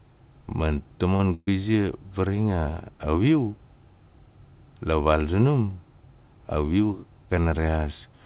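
At about 1.16 to 1.22 s there's a short concealed packet loss: roughly 30 ms of audio never arrived in time, so the receiver extended the last bit of speech for about 31 ms and blended back into the real signal. You hear it as a quick smear or wobble. It's there.

Right after, from about 1.34 to 1.50 s, comes a proper burst of packet loss, around 120 ms missing in one go. The decoder kept the last sound going for about 128 ms and faded it down, so you get a held buzz or a hiss that dies away, then about 30 ms of actual silence before the speech picks up further along, with the chunk in between lost. A voiced sound turns into a droning hold rather than the next syllable. All of this sits on a narrowband call path with nothing above 4 kHz, which fits G.711 mu-law.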